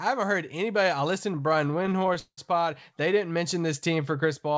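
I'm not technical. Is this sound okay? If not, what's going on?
No. Repeated stalls (stutter) from 1.36 to 2.39 s, after "heard anybody I listened": call data kept arriving late, so sounds get stretched and the speech drags and stutters.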